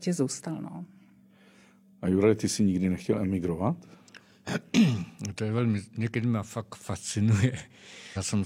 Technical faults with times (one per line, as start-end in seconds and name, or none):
8.13-8.18 compressed frames skipped